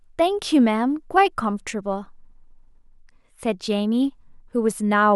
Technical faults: clock slip clicks

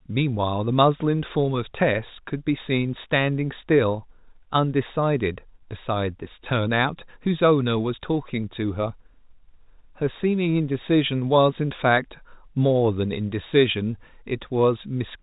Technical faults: none

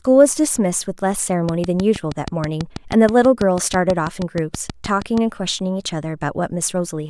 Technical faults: train of clicks

